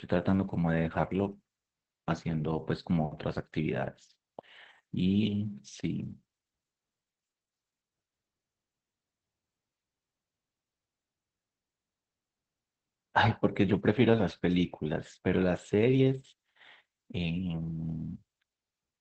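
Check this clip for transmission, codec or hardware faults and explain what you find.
There's one codec fault running the whole way through. Opus voice compression: speech is coded by SILK's linear prediction, band-limited near 8 kHz, with coarse excitation that fits roughly 12 kbps, so it sounds plainly muffled, hoarse and slightly robotic.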